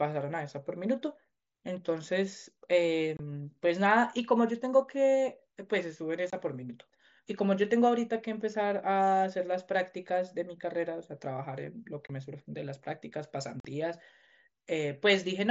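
Unconcealed Bluetooth headset packet loss hits this speech clip, sent over a wideband mSBC link whose audio reaches up to 8 kHz: runs of voice packets between headset and phone were dropped and filled with silence or an idle pattern rather than patched over. The speech breaks into abrupt holes, about 22 ms long at 3.17, 6.30 and 12.07 s and about 45 ms at 13.6 s, each with hard edges that can click.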